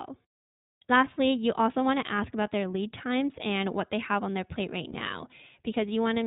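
All the way through, the speech carries the iLBC codec's signature. It's narrowband, so nothing above 4 kHz survives, and it has that slightly rough, synthetic edge you get when each short frame's excitation is coded on its own. The codec damage is plainly audible, not subtle. The texture fits iLBC's 15.2 kbps mode working in 20 ms frames, where every frame stands alone rather than building on the one before it.

Then, from about 4.92 to 4.95 s, there's a lost iLBC frame. The packet never made it, so the decoder filled the hole by repeating the last pitch cycle with some noise mixed in. You hear it as a tiny held, faintly buzzy vowel-like blip, the length of a single 20 ms frame. Because the frames are independent, the voice snaps back to normal right after, with no lingering smear.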